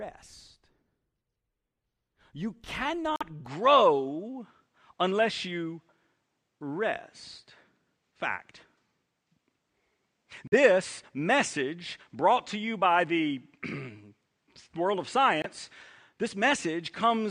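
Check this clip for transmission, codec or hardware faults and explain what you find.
Two faults are audible: brief dropouts and a change of input device.

At 3.16 s, 10.47 s and 15.42 s the sound cuts out for about 46 ms, 46 ms and 23 ms. The likely cause is a Bluetooth dropout: audio packets arrived too late and were discarded. The gaps fit whole lost frames of about 23 ms, and the sound resumes as if it had kept playing.

From 3.46 s to the end, the input appears to have switched to a poorer device, likely another microphone or a headset call profile. Nothing is heard above 9.5 kHz, so the speech turns duller. The level shifts by about 5 dB, and a faint new noise floor appears, with no silence at the switch.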